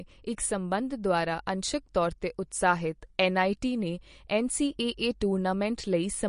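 Throughout, the speech has a watery, swirly quality, and a spectrogram shows a hard ceiling at 10.6 kHz with flickering gaps, likely MP3 compression at roughly 40 kbps.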